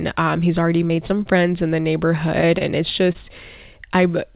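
Short concealed packet loss occurs three times in close succession, at 0.88–0.91 s, 0.95–0.99 s and 1.07–1.11 s, then twice more at 2.58–2.62 s and 3.12–3.16 s. Each gap corresponds to about 20 ms of audio that failed to arrive, which fits single lost 20 ms packets. The decoder fills each gap by extending the preceding sound, pitch-based for voiced sections and noise-based for unvoiced ones, before crossfading into the next real packet. Each one sounds like a brief smear or wobble, and a short consonant at these points may go missing.

Directly after the first cluster, a jitter buffer slow-down runs from 1.18 to 1.44 s. The receiver rebuilds its reserve by repeating individual pitch periods or pieces of pauses, adding 37 ms and slowing that stretch to 88% speed. The pitch is unchanged, so the sound comes across as drawn out rather than lowered, with a possible slight warble. Throughout the clip the audio has nothing above 4 kHz, consistent with a G.711 mu-law call path at 64 kbps.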